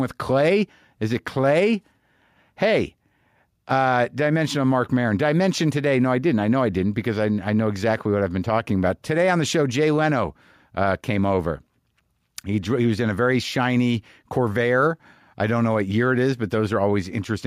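No technical faults can be heard anywhere in this speech recording. There is nothing in the signal that needs a timestamp or a description of something going wrong.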